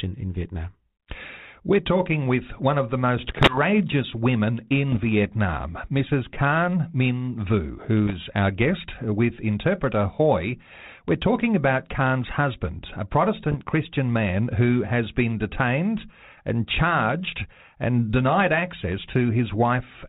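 Bit errors on an ADPCM link strike at 3.17–3.58 s (after "with one of the"), 4.92–5.05, 8.07–8.15 and 13.48–13.65 s. Each flipped bit derails the decoder's step size and predictor, so the speech breaks into pops and rough, level-jumping bursts.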